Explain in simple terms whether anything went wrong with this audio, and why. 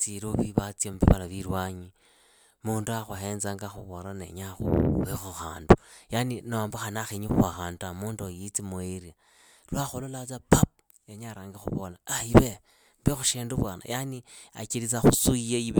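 Nothing went wrong here: the speech comes through as a steady, unbroken signal with no technical faults to point to at any moment.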